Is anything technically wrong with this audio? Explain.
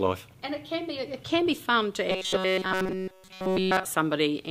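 Yes. From 2.08 to 3.85 s, robotic sound from repeated short buffers: a rigid 188 Hz metallic buzz, likely from repeating 5.3 ms chunks, appearing as flat harmonic stripes on a spectrogram and as identical cycles in the waveform.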